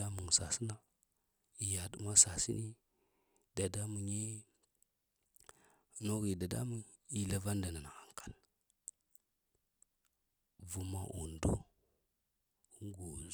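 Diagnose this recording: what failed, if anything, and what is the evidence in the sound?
Nothing failed; no stage in the chain shows an audible fault.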